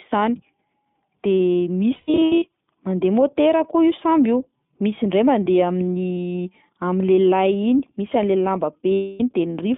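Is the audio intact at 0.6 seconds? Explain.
No. At 0.6 seconds, as throughout the clip, the speech carries iLBC codec damage. Each 20 ms frame's excitation is coded independently, leaving plainly audible roughness and a synthetic edge. The band is confined to about 150 Hz to 3.6 kHz, and the codec runs at 15.2 kbps.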